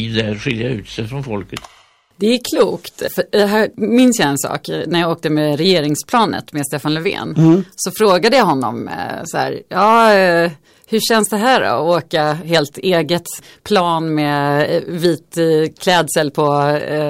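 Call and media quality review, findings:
Hard clipping, throughout the speech. Symptom: crackle on the loudest peaks of the talker, with added high-frequency content from flattened waveform tops. Overdrive about 5 dB past the ceiling of some stage, affecting under 1% of samples, so only the peaks are squared off. Probable component: a gain stage feeding a converter or fixed number format that cannot pass the level. Check upstream gain staging and input level settings.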